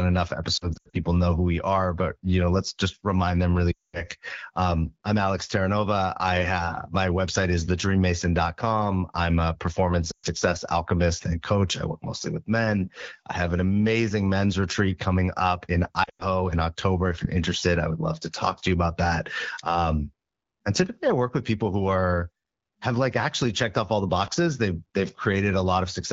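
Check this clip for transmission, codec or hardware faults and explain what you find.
Yes, there are transmission faults: four bursts of lost AMR speech frames.

Lost AMR speech frames occur at 0.57–1.04 s (scattered, before "know who we are"), 3.72–4.04 s (after "let's just remind them"), 10.11–10.26 s and 16.03–16.23 s (after "retreat coming up in"). The decoder repeats its last good pitch and vocal tract settings at falling gain, so the speech warbles and drops to near silence within two frames, then returns briefly rough.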